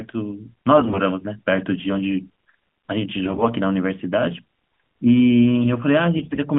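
Three short bursts of AMR bit errors, at 0.78–1.0 s, 3.26–3.49 s and 6.16–6.39 s. Flipped bits in the less protected parts of the codec frames misplace the excitation pulses, so pitch and level survive but the speech turns hoarse and gargly. The first burst is roughest.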